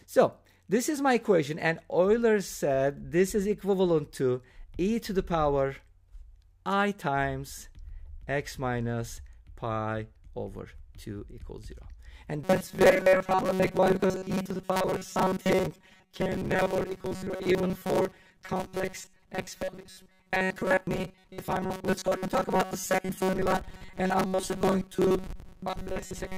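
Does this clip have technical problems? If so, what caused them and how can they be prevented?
Yes. From 12.44 s to the end, there is robotic sound from repeated short buffers: a rigid, metallic buzz at 188 Hz. Audio likely arrived too seldom, so chunks of about 5.3 ms were replayed while most real audio was skipped. A larger buffer or a lighter processing load keeps audio arriving on time.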